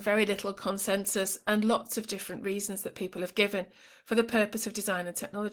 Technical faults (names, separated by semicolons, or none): none